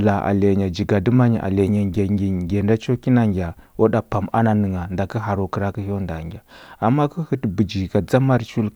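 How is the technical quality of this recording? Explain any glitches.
The technical quality of this recording is good, with no glitches to explain.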